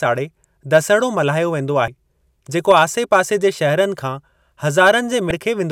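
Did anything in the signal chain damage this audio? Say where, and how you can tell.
Yes. The damage sits at the codec/storage stage: damaged data in a compressed stream. Two short bursts of corrupted sound, about 30 ms each, break into the speech at 1.85 to 1.88 s and again at 5.28 to 5.31 s. These are not clicks from the analogue path. Bad bytes in the encoded frames there led the decoder to reconstruct garbage until it regained sync on a valid frame header.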